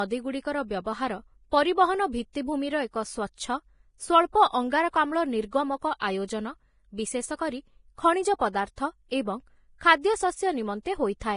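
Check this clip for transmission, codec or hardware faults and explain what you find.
Two codec faults are audible: heavy lossy-compression damage throughout, and one pre-echo.

Throughout the speech there is nothing above 10.5 kHz, and the remaining treble has a hissy, grainy texture, with roughened tones and softened consonant onsets. The likely cause is heavy Vorbis compression at a low bitrate, something near 29 kbps. The encoder lowered its cut-off and quantised the upper residue so coarsely that fine detail became noise of similar energy. Unlike a simple low-pass filter, it doesn't just remove treble but leaves a grainy noise in the band that remains.

From 5.99 to 6.02 s there is a pre-echo: a brief hiss, about 22 ms long, runs ahead of a sharp attack and makes that onset sound smeared. The codec spread quantisation noise across the whole transform block, so noise sized for the loud attack also filled the quiet moment before it. 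Because the hiss comes before the transient and not after it, this is not ringing or reverberant decay.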